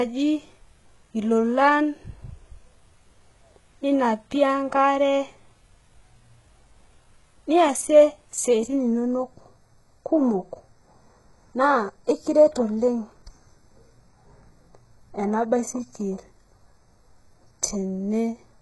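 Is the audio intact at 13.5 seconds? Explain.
No, 13.5 s falls inside a stretch with two overlapping problems.

From 8.76 s to the end there's channel delay with comb filtering. One channel is running a tiny fraction of a millisecond behind the other, and when they're summed to mono, anything common to both cancels at evenly spaced frequencies. The first deep notch lands around 3 kHz, with more above it, so the speech at that moment sounds hollow and phasey, like it's coming through a tube.

Underneath that, across the whole clip, the top end stops dead at 11.5 kHz and the highs sound heavily mangled: sibilants come out gritty and a bit lispy, with a synthetic, metallic sheen rather than real detail. That's likely HE-AAC compression at a very low bitrate, something like 12 kbps. The codec keeps only the lower spectrum and fakes the treble by copying lower bands upward and shaping them loosely, so the rebuilt highs never quite match the real harmonics.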